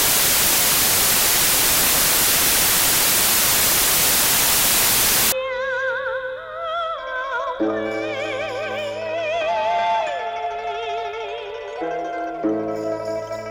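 Samples built from the wrong bytes run from the start to 5.32 s: the reader assembles each sample from its bytes incorrectly, whether off by one byte, with the byte order swapped, or with the wrong alignment assumed, so the rapidly changing low-order bits end up as the most significant part of every value. The result is loud, harsh broadband noise, close to white on loud passages.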